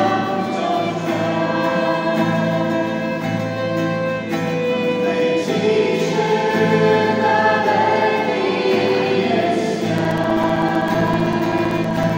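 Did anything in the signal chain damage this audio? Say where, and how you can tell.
Yes. At the driver or USB transfer stage, something stalled the audio path at a fixed interval, giving periodic USB or driver dropouts from 9.98 s to 12.10 s. Every 64 ms, a few milliseconds of sound went missing and were replaced by silence, around thirty times in all. Each gap breaks the waveform abruptly, so the stretch carries an evenly spaced train of ticks that is heard only where signal is present.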